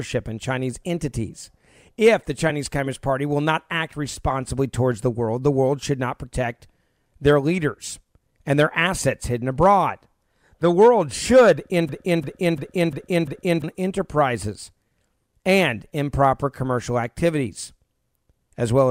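The playback chain likely stalled at 11.89 s, just after "world should", and kept resending its last held fragment. The result is a broken-record loop: a 0.35 s slice repeats exactly, five times back to back, until 13.64 s, replacing the speech that belonged there.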